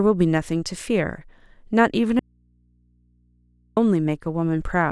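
At 2.19 s the speech cuts out abruptly for about 1.57 s, until 3.77 s, leaving only a low mains hum roughly 40 dB below the voice: an audio dropout to a faint residue. The hum suggests the signal was likely lost while the downstream input stayed live, unlike true digital silence or a natural pause.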